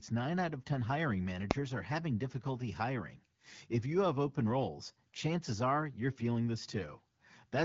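Speech, with one sharp bang at 1.51 s. That's invalid numbers at full scale: a calculation blew up, and a block of about 0.67 ms got pinned to one extreme value, far too short to hear as anything but a single bang. The AMR wideband (HD Voice) path sounds clean and light, with nothing above roughly 7.5 kHz, which fits a 12.65 kbit/s rate.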